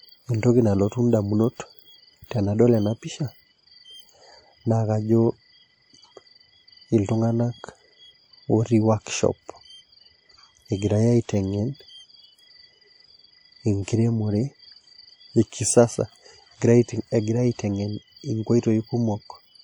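Throughout the speech, plainly audible transform-codec damage, likely WMA compression at a rate that points to around 48 kbps, leaves ringing, washy smearing and hiss that breathes with the signal. On a spectrogram, quantisation noise blurs across tens of milliseconds, with nothing above 20.1 kHz.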